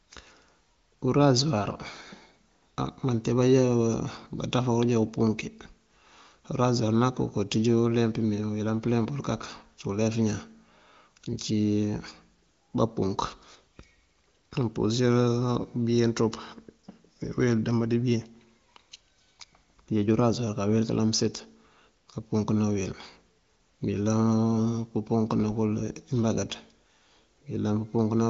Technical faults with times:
none

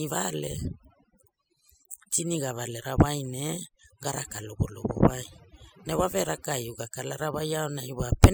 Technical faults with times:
0.00-8.33 overdone noise removal

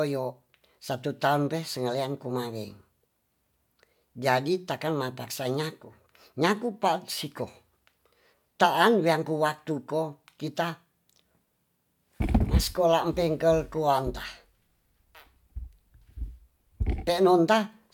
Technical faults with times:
none

